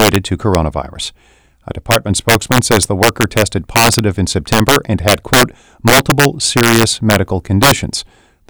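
Integer overflow runs through the whole speech clip. The signal was pushed about 6 dB past the top of the integer range, and instead of being held at the limit, each peak that crossed it wrapped around to the opposite extreme. Only a small share of samples, around one or two percent, go over, so the damage lands on the loudest moments as harsh, violent cracks. Clipping would flatten those peaks into a duller buzz rather than snapping them across the full range.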